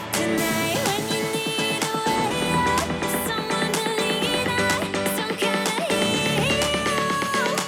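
Nothing stood out as a technical problem on listening to the audio.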